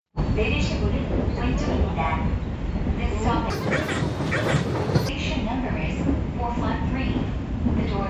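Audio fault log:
3.50–5.09 s, wrong sample rate: the sound abruptly turns thin, chirpy and rushed, running at double speed and pitched up a full octave (12 semitones), then drops back to normal. The samples are being played out twice as fast as they were captured, with no rate conversion, so timing and pitch shift together by the same 2:1 ratio. That fits audio recorded at 16 kHz being played as though it were 32 kHz.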